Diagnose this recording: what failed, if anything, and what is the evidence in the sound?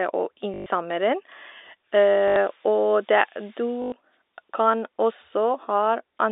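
Packet loss with last packet repeated, a network fault, at 0.54–0.66, 2.28–2.36 and 3.82–3.92 s: the receiver replays one packet, producing a buzz that fits 20 ms packets.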